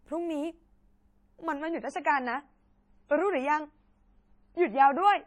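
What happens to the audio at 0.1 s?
At 0.1 s the audio is intact, with no dropout, click, distortion or other fault at that moment.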